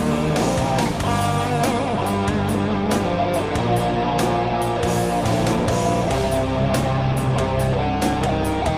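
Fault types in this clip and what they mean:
No fault is audible in this clip: level, timing and continuity hold steady throughout.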